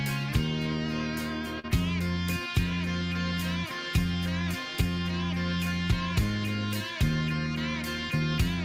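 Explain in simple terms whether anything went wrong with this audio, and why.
Short concealed packet loss, 1.59 to 1.66 s: 40 ms of audio arrived too late, so the receiver stretched the preceding sound across the gap.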